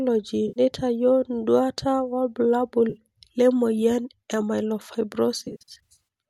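At 0.48 s an 80 ms patch smears into a noisy, phasey blur. This is AAC frame loss with concealment. The decoder lost its data and rebuilt the gap from the last good spectrum. At 2.90 s, between "nduata wobulabul" and "le moyian e", a 40 ms smear follows. From 5.38 to 6.01 s, gaps totalling 380 ms are scattered through the audio, each under about 70 ms. The patches fit the short frames of the likely low-delay AAC.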